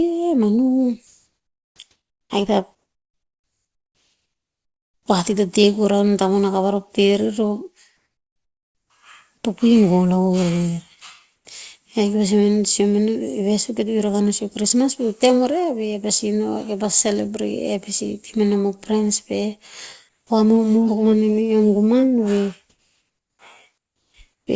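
A speech recording carried over a call path, with nothing above 8 kHz, which fits the G.722 codec at 64 kbps. Comfort noise in place of the background appears six times: 2.75 to 5.06 s, ending just before "pah tii to teh", then 7.97 to 8.90 s, 11.36 to 11.45 s, 20.09 to 20.30 s, 22.70 to 23.39 s and 23.78 to 24.47 s. The real background drops away. A flat, featureless hiss replaces it, about 3 to 7 dB quieter. The likely cause is discontinuous transmission: the sender stops sending during pauses and the receiver synthesises noise. The onset is clipped by the voice detector twice, at 1.77 to 1.79 s and at 20.25 to 20.30 s. About 20 ms and then 50 ms of the start are missing. Sound begins abruptly, with no soft attack. This likely comes from a voice detector that reacts late, so the receiver filled those first moments with comfort noise.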